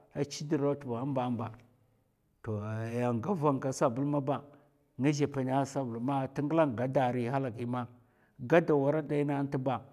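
No dropouts, glitches or other technical faults can be heard anywhere in the recording.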